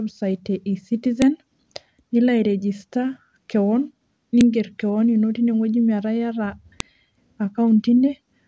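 At 1.22 s, 4.41 s just before "keon ino teineweji", and 6.80 s there's a sharp, loud snap cutting through the speech: a file header played as audio, where joined WAV pieces kept their header bytes and those got played back as samples.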